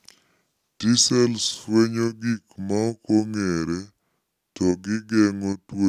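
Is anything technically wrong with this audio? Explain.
Yes. The speech has a wrong sample rate fault running through the whole clip. It plays at about 0.73 times its proper speed, which fits audio recorded at 44.1 kHz being played back at 32 kHz with no conversion. Speed and pitch drop together, by about 5.5 semitones, so the voice sounds low, slow and heavy. On a waveform, syllables and pauses appear stretched by roughly 38 percent. On a spectrogram, the harmonics and formant bands sit lower and closer together than normal.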